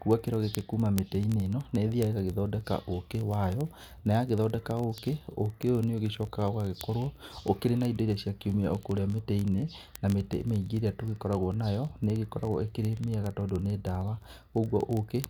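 A receiving device running on its own clock, not locked to the sender's digital link, slips about 0.1% against it, so one sample is dropped or repeated roughly every 20 ms. In this speech clip, word clock ticks run from 0.11 s to 15.28 s as a steady, sharp ticking of uneven strength, hundreds of them in all.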